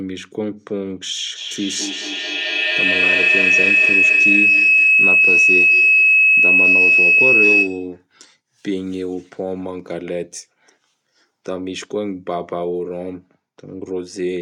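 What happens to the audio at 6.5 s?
Feedback howl runs from 1.35 to 8.01 s: sound from a loudspeaker re-enters a nearby microphone and gains level on each pass, narrowing into a shrill tone near 3 kHz that repeats roughly every 200 ms and peaks about 10 dB above the speech.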